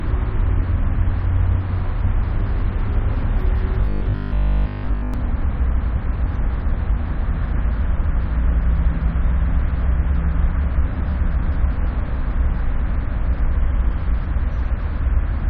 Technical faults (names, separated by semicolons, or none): robotic sound from repeated short buffers; damaged data in a compressed stream